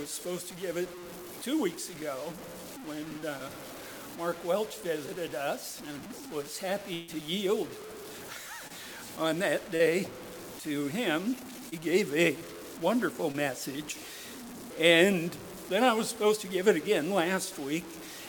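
From start to end a gritty, grainy distortion rides on the sound and changes with it, quite loud against the signal. The likely cause is low bit depth without dither, around 6 bits truncated. Unlike steady hiss, it follows the level.

From 6.93 to 7.10 s a burst of packet loss leaves about 140 ms missing. The last sound is held and fades for about 0.14 s, then the audio resumes further on.

Shorter, concealed packet loss produces brief smears or wobbles of about 20 to 40 ms at 8.68, 9.76, 11.69 and 13.32 s. These are far briefer than that burst, with only a few hundredths of a second skipped.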